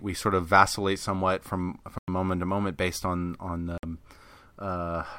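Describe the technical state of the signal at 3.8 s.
At 3.8 s the speech drops out completely for about 53 ms, from 3.78 to 3.83 s, then resumes. The pattern fits a Bluetooth stall: the likely cause is radio interference delaying packets long enough for the headphone buffer to empty, so playback halts until retransmitted data arrives. On a waveform it appears as a flat, silent gap with abrupt edges; a spectrogram shows a clean vertical blank band across all frequencies.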